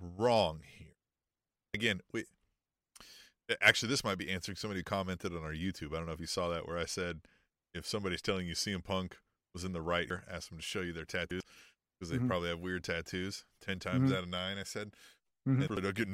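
Compressed frames skipped at 1.74–1.84 s, 10.10–10.20 s (between "was in the right" and "asked them to show"), 11.31–11.50 s (after "to show you their") and 15.68–15.77 s. Each time the decoder drops whole frames, and the speech leaps ahead by roughly 100 ms, 200 ms, 200 ms and 400 ms. On a spectrogram the harmonic tracks break off abruptly, and the waveform splices mismatched envelopes together.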